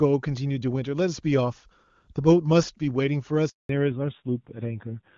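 At 3.49 s the speech cuts out into 200 ms of silence until 3.69 s. This is a handover gap: no speech frames arrived while the call switched networks. From 3.69 s to the end the voice sounds duller and rougher, with nothing above 4 kHz. This is a fallback to narrowband, from clear HD Voice wideband coding to a low-rate narrowband codec.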